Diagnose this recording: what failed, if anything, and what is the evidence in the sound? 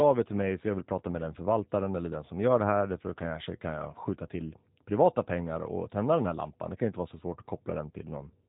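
Codec stage: the speech sounds rough and synthetic throughout, as G.729 codec resynthesis at about 8 kbit/s would. On a spectrogram, all energy stops at a hard ceiling near 3.8 kHz.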